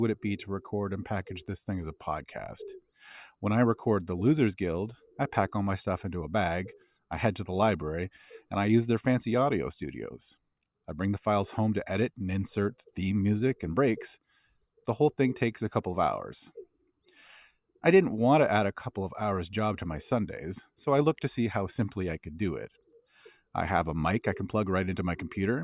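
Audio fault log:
Nothing to log here, as this speech recording runs along without a single fault turning up anywhere.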